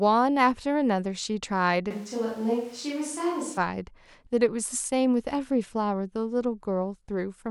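From 1.91 to 3.57 s the speech abruptly turns roomy and hollow, with thinner bass and a noise floor roughly 25 dB below it, then snaps back. This is a switch to a distant microphone, likely a failed close mic. The sudden jump, unchanged level and added room noise distinguish it from applied reverb.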